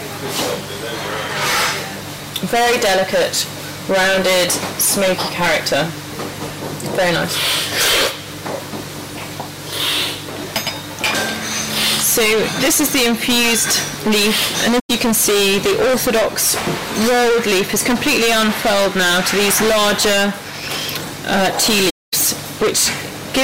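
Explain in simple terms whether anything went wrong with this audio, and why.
A harsh, buzzing fuzz sits on every loud sound from start to finish. This is hard clipping: the sound was pushed far too loud for the recording to hold, so its peaks were sliced flat. Roughly a third of the audio is cut off this way, and those flattened edges create the gritty noise.

The sound also briefly fades into silence and back at 14.79 to 14.91 s and again, for about a quarter of a second, at 21.89 to 22.14 s. This is AAC frame loss with muting: small chunks of compressed audio went missing, and the player filled each gap with silence, blending smoothly in and out.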